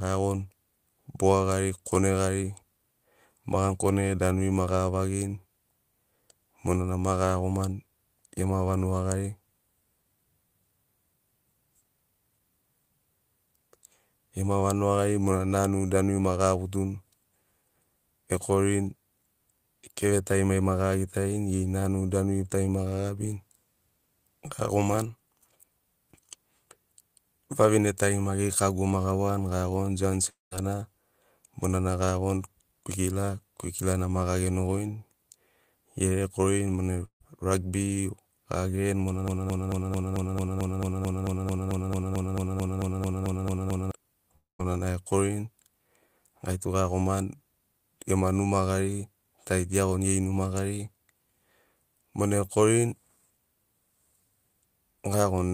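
Right after "kago ma gawani giagoni", at 30.29 to 30.53 s, the speech breaks off in what is likely a long network dropout. The last sound is stretched into a fading buzz, and then about 0.16 s of silence follows. Roughly 0.22 s of speech is gone when the audio resumes.

At 37.05 to 37.22 s, a burst of packet loss removes about 0.16 s. The receiver's concealment holds the preceding sound briefly and turns it down, leaving about 0.1 s of silence before playback picks up further along.

From 39.28 to 43.91 s, a broken-record loop repeats the same 0.22 s fragment back to back 21 times. This stutter most likely comes from a stall in the stream or player, which kept resending its last buffered piece. The speech that belonged to those 4.6 s is lost.

At 44.36 to 44.61 s, a second event that is likely a long network dropout behaves the same way. A fading continuation of the last sound gives way to about 0.17 s of silence, and about 0.24 s of speech never plays.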